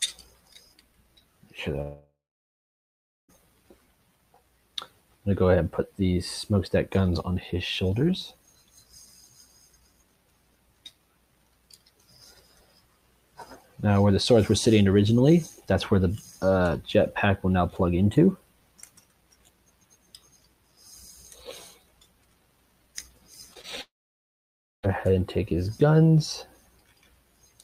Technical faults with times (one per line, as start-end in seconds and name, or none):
1.81-3.30 long network dropout
23.54-23.66 short concealed packet loss
23.82-24.85 long network dropout